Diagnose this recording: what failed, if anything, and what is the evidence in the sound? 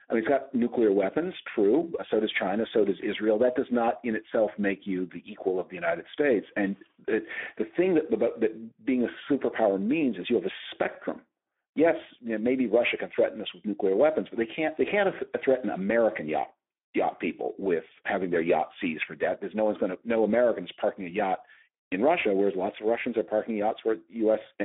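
The failure is at the codec stage: the speech has been through the Speex codec for the whole clip, and the damage is plainly audible. With too few bits to describe the excitation, CELP coding leaves the speech grainy and hoarse, with a bitrate that fits roughly 11 kbps. A spectrogram shows a telephone-style band from about 250 Hz to 3.5 kHz, a bare ceiling with nothing above 3.7 kHz, and smeared, noisy harmonics instead of clean striations.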